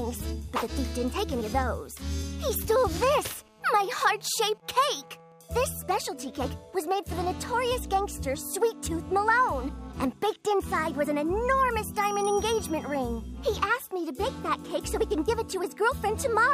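From 3.01 to 4.5 s, a GSM phone buzz sits under the sound. It is a hard, raspy tone at about 217 Hz, thick with harmonics. It has no link to the programme material. The buzz is steady, which points to a nearby 2G phone in an active call. The phone sends radio bursts about 217 times a second. The audio circuit rectifies those pulses into audible signal. The buzz sits about 31 dB below the signal.

From 4.54 to 7.24 s, the buzz changes into GSM signalling bursts. The steady tone gives way to even ticks with a longer buzz twice a second. This fits the same phone still in its call but with its user silent. The phone then transmits only short groups of bursts instead of a continuous stream. The circuit rectifies each group, so the interference arrives in clusters. It sits roughly 30 dB below the signal.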